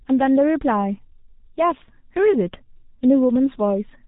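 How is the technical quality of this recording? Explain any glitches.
Technical quality is poor, because the speech has passed through a very low-rate telephony codec. Throughout the clip, G.723.1 codec damage is heavy. The codec models the voice in coarse 30 ms frames and, at a rate that points to about 6.3 kbit/s, cuts everything above 3.8 kHz. The speech sounds muffled and hoarse, with smeared consonants.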